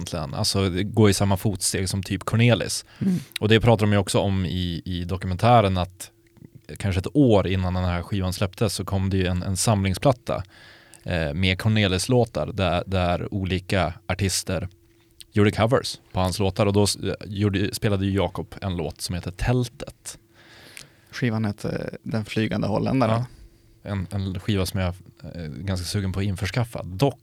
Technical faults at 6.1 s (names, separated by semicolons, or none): none